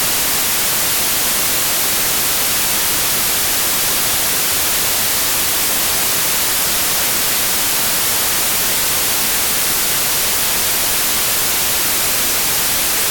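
From start to finish the audio carries loud, harsh broadband noise, the sign of samples built from the wrong bytes. Each value is assembled from misordered or misaligned bytes, so fast-changing low bits dominate.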